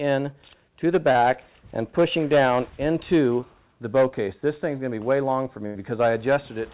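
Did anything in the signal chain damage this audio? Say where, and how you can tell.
Yes. Short concealed packet loss at 1.12 to 1.17 s and 3.41 to 3.44 s points to the network stage: about 20 ms failed to arrive in time. The receiver extended the preceding sound to cover each hole, heard as a brief smear or wobble.

A burst of packet loss at 5.66 to 5.79 s is also a network fault, where roughly 80 ms went missing in a row. The receiver carried the last sound forward while fading it, then resumed further on. Throughout, the G.711 call path leaves nothing above 4 kHz.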